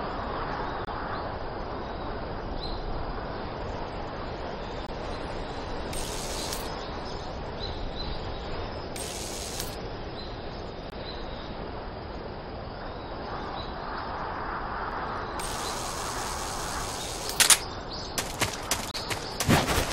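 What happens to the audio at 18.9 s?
At 18.91–18.94 s, a gap between stream segments: timestamps at a 2.0 s segment boundary leave about 29 ms unfilled, heard as a hard-edged silent dropout.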